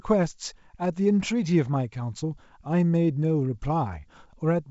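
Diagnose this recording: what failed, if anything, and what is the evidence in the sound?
Nothing failed; no fault is audible in this recording.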